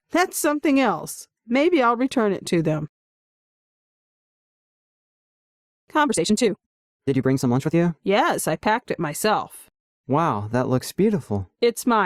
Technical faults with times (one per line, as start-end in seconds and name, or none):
6.01-7.75 time-stretched section